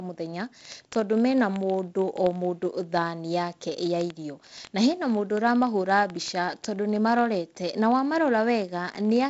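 A receiving device running on its own clock, unlocked from the sender and off by roughly a thousand parts per million, drops or repeats one sample about fifty times a second. In this G.722-coded speech, which stops near 7.7 kHz, the result is word clock ticks: a steady, sharp, uneven ticking from 0.11 s to 9.28 s.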